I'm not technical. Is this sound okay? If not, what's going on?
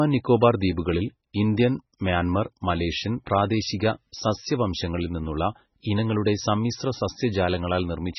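No. The speech sounds dull and watery from start to finish, with nothing above about 5.9 kHz and a swirling, chirpy edge on s sounds. That's likely heavy MP3 compression. A simple muffled microphone would sound dull, but it wouldn't swirl or chirp like this.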